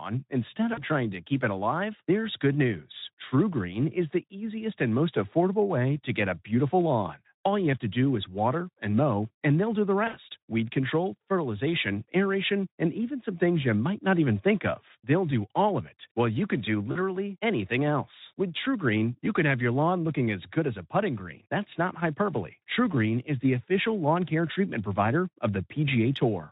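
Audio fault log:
0.73–0.83 s, 10.07–10.17 s, 16.91–16.98 s: VoIP packet loss concealed by the speech codec. Before "trying to keep it", between "and they'll do the" and "weed control", and after "while you can do", sound smears into a fading buzzy or noisy stretch. About 40, 60 and 40 ms of packets went missing, so the Speex decoder extrapolated from the last pitch and filter with falling gain.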